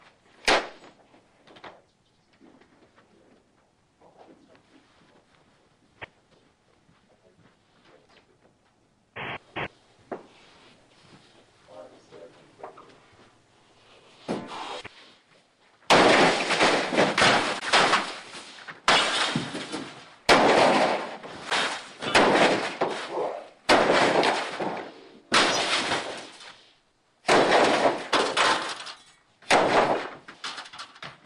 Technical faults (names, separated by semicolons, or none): block of digital silence